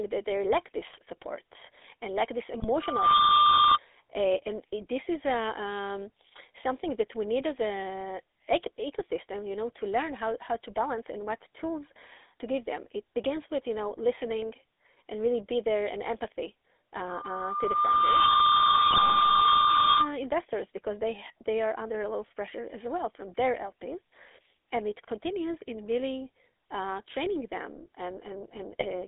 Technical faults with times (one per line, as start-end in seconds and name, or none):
0.00-29.07 GSM full-rate codec
0.83-0.97 GSM bit errors
2.60-2.68 GSM bit errors
2.81-3.78 loudspeaker feedback squeal
17.09-20.12 loudspeaker feedback squeal
18.90-19.20 GSM bit errors
28.72-28.85 GSM bit errors